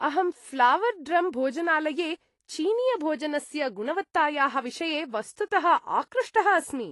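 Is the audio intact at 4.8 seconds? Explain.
No. At 4.8 seconds the speech carries AAC compression damage, which runs through the whole clip. Nothing sounds above about 11.5 kHz, so the top is dull. The damage is plainly audible: smeared detail and a warbling, fizzy edge on sibilants and held sounds. The likely cause is AAC-LC coding at a low rate, around 32 kbps. The encoder lowers its cut-off, leaves gaps between bands, and fills some with substitute noise.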